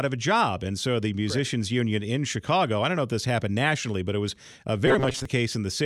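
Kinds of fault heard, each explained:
Robotic sound from repeated short buffers: From 4.87 to 5.25 s the speech becomes a rigid, metallic buzz at 133 Hz. About half the sound seems replayed. The likely cause is late audio covered by repeating a short chunk, and the pitch fits a chunk of about 7.5 ms.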